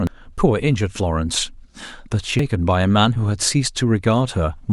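A brief glitch cuts into the speech at 0.07 s, and a second one at 2.39 s, each momentary rather than a sustained noise. Both come from damaged data in a compressed stream: a stretch of the encoded file was corrupted, so the decoder misread the frames at those points, lost sync, and had to hunt for the next valid frame header before normal playback could resume.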